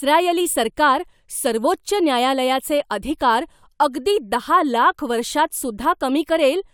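No faults are audible anywhere in the recording.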